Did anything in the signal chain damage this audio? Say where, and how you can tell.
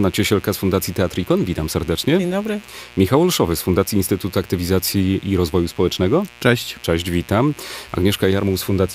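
Yes. A mains buzz runs through the whole clip, so the damage happened in the analogue wiring, before conversion. The buzz is raspy rather than smooth and sits roughly 25 dB below the wanted sound. Its harmonics stack on a 60 Hz fundamental and reach well into the kilohertz range. That points to switching spikes from a dimmer, rectifier or unshielded cable arriving twice per mains cycle. A plain earth-loop hum would be a soft, mostly sinusoidal 60 Hz tone.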